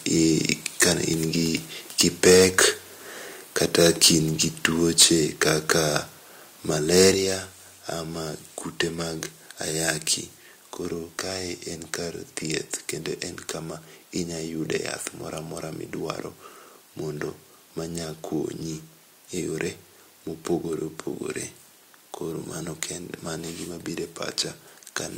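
Harsh, crackling edges mark the loudest syllables at 0.8–0.88 s, 2.0–2.65 s, 3.56–4.09 s, 4.42–4.66 s and 4.99–5.06 s. This is likely microphone overload, with peaks driven about 7 to 11 dB past the converter's limit and their tops sheared off. The worst case is at 4.99 s. At 5.02 s the speech and background suddenly drop by about 3 dB, likely the microphone volume being stepped down after that distorted peak. The crackle returns at 5.41–5.97 s and 6.95–7.09 s, and a second, deeper step of about 5 dB follows at 7.14 s.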